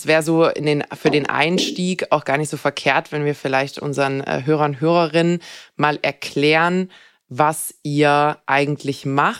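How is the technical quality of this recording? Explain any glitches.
Listening closely to the recording, nothing in it stood out as a technical problem.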